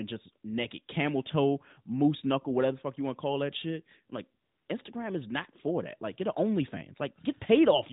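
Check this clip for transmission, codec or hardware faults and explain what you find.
One fault stands out. The clip is speech carried over a narrowband mobile link, and nothing above about 4 kHz comes through. AMR comfort noise fills 4.44 to 4.68 s. For 240 ms, the phone treated the talker as silent and sent no speech frames. The receiver made up noise from a rough estimate of level and spectrum. The real background drops away. A smooth, steady hiss switches in, then out again.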